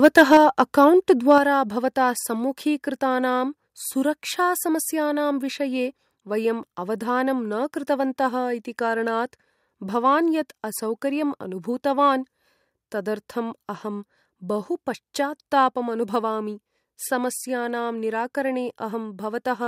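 From 0.04 to 0.61 s the speech has a harsh, crackling edge on its loudest parts. This is microphone overload. The input likely sits about 6 dB too hot, so the peaks run into the converter's ceiling. Their tops are sliced flat. A few percent of the samples in that stretch are clipped. The flattened peaks add buzzy distortion to the syllables.

At 0.37 s, still inside that distorted stretch, the level drops suddenly by about 4 dB. Speech and background fall together. This is the microphone volume stepped down in a single jump. Call software likely reacted to the clipping by cutting the device's input gain.

From 1.31 to 1.33 s another brief microphone overload follows. It is milder, about 1 dB over. The short crackle again points to peaks hitting the converter's limit.

At 1.38 s the level drops again, this time by about 5 dB. This second microphone volume step-down likely follows from that distorted peak. 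The whole sound becomes abruptly quieter.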